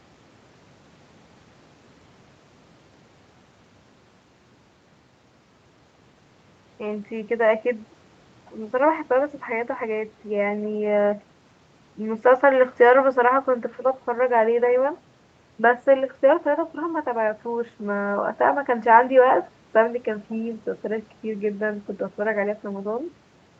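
The speech reaches the listener with no technical faults, carrying the ordinary band-limiting of a call path, with nothing audible above about 8 kHz after the microphone processing and the call codec.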